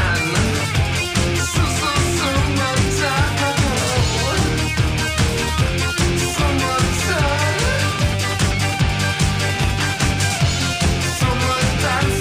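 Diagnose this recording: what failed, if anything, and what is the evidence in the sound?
Nothing here failed: I can't hear a single event or stage in the chain that points to trouble, so there's no evidence to report.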